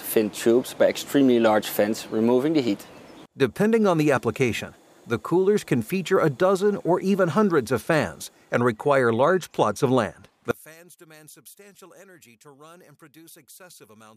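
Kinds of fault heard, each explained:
One channel inverted: from 10.51 s the sound thins to a faint residue about 28 dB down, not dropout silence, likely from reversed polarity cancelling in mono.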